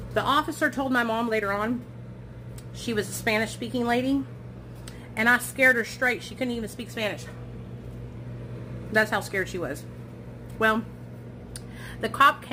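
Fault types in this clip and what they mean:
Sample clock jitter: present throughout, the converter's timing wanders by around 7 microseconds, so samples land early or late and the error tracks the waveform's slope. It is heard as a grainy hiss riding on louder, brighter passages, roughly 25 dB below the sound.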